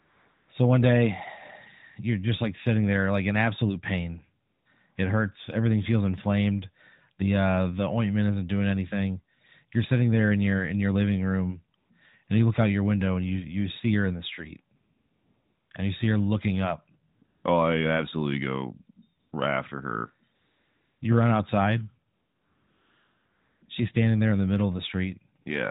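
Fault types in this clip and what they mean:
AMR comfort noise: pauses turn into a smooth, steady hiss that switches in and out, because the phone stopped sending speech frames and the receiver generated filler noise.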